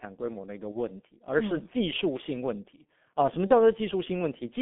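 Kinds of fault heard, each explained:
G.723.1 codec: a 6.3 kbit/s telephony coder limiting the speech to about 200 Hz–3.5 kHz, heavily muffled and hoarse; spectrograms show nothing above 3.5 kHz and smeared consonants.
VoIP packet loss concealed by the speech codec: single 30 ms frames lost near 0.71 and 3.47 s, patched by extrapolation into a brief fading buzzy tone or coloured noise, seen as smeared, decaying energy.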